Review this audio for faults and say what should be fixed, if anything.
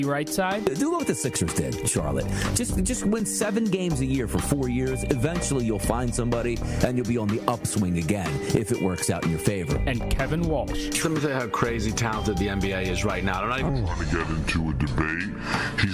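From 13.69 s to the end at 15.94 s, there's a wrong sample rate fault. The sound drops to about 0.73 times speed and about 5.5 semitones lower, both shifting together, which fits 44.1 kHz material being played back at 32 kHz without any resampling. To prevent it, check that the playback rate matches the source, or resample explicitly wherever the two rates differ.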